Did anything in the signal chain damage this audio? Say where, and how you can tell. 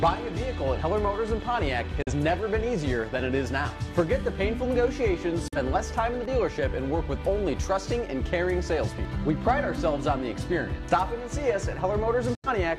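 Yes. Digital broadcast dropout at reception: brief muted holes at 2.02–2.12, 5.48–5.57 and 12.35–12.49 s, each with a 3 ms fade to silence rather than concealment, suggesting one or two lost frames.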